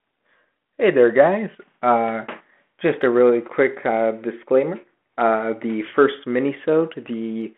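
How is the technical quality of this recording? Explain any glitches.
Nothing in this recording stood out as a glitch or technical problem on listening.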